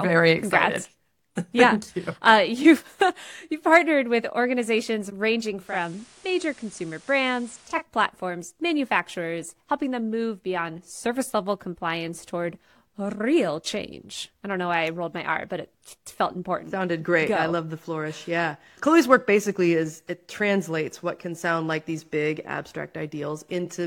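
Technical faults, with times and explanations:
5.55–7.87 s, digital radio blending to analogue: the receiver loses its digital stream and cross-fades over 276 ms to the station's FM broadcast, then returns. For that stretch, the FM path brings a steady hiss sitting roughly 25 dB below the programme, and the level drops by about 2 dB, so the sound turns quieter and noisier.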